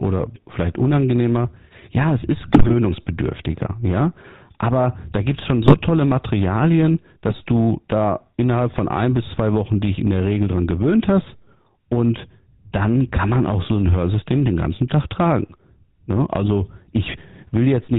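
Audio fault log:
Throughout: GSM full-rate codec. The speech has a buzzy, gravelly roughness that is plainly audible. The codec models the vocal tract and drives it with a sparse, regular pulse train rather than the true excitation. Much of the fine detail is lost. Nothing above 4 kHz survives, so the sound is narrow and dull. The sound points to the 13 kbps full-rate coder of early GSM phones.
2.42–2.73 s, 5.62–5.81 s, 7.28–7.35 s: GSM bit errors. The speech breaks into squawks, pops and gargling for a fraction of a second each time. Corrupted bits reached the decoder. Wrong filter, pitch or gain values bent the spectrum or threw the level up frame after frame. The first burst is longest and roughest. The last is only brief.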